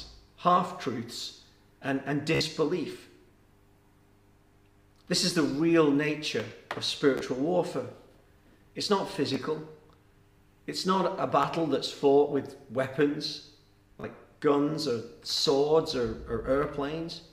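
Bluetooth stutter at 2.35–2.41, 7.18–7.21, 9.34, 11.43 and 14.01–14.04 s: late packets make the receiver repeat its last buffer, giving brief buzzy repeats of 14.5–58 ms before the sound jumps ahead.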